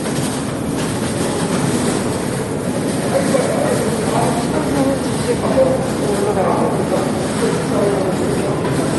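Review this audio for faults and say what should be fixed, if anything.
MP3 compression, throughout the clip: nothing is present above 11.8 kHz, and the compression damage is plainly audible across the whole recording. This is likely a low-bitrate MP3 encode, one that fits roughly 48 kbps. With that few bits, the encoder discards the top of the spectrum at a fixed frequency and drops quieter frequency components that it judges less important, so the detail they carried is lost. To prevent this, keep an uncompressed or losslessly encoded master, and export from it at a much higher bitrate.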